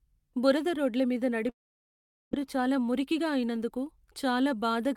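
At 1.49 s the speech cuts out, and the last sound is stretched into a short, fading buzz before the signal drops to near silence, about 0.79 s of it. Audio resumes at 2.41 s, with roughly 0.8 s of the original speech gone and the timing afterwards shifted by about 20 ms. This is likely a long network dropout: packets stopped arriving, and the receiver's concealment filled the gap instead of playing the lost material.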